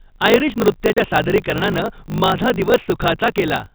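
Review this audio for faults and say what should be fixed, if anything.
Block size mismatch (truncated) runs throughout the clip. A steady buzz sits at 50 Hz, and the speech plays about 1.16 times too fast while keeping close to its normal pitch. One stage writes blocks longer than the next stage takes in, so the tail of every block is discarded. The skipped slices shorten the timeline, and the seam at each block boundary repeats at the block rate. The pattern fits a 1024-sample write being read in shorter pieces. To prevent it, the writer's and reader's block sizes should be matched, or a proper buffer should sit between them.

Packet loss filled with silence occurs from 0.93 to 0.97 s. The speech drops out for about 40 ms, with abrupt edges. The gap length points to two consecutive packets lost in transit, with the receiver inserting plain silence instead of concealing them. To prevent it, the receiver should use loss concealment and a jitter buffer, and the network path should be checked for drops.

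Loose connector crackle runs from 1.49 to 1.84 s. An irregular burst of scratchy crackle breaks up the signal during this stretch. A worn or dirty contact is making and breaking rapidly, which chops the audio in and out. The G.711 telephone coding carrying the call passes the part of this crackle below 4 kHz along with the rest of that band. To prevent it, the suspect cable and jack should be cleaned, reseated or replaced, and strain relief should be added.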